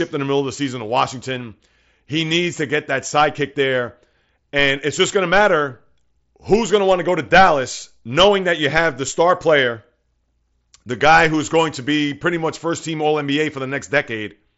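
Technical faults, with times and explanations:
Nothing here counts as a fault: the sound comes through a Bluetooth mSBC headset link working as it should, with the usual wideband ceiling leaving nothing above about 7.7 kHz.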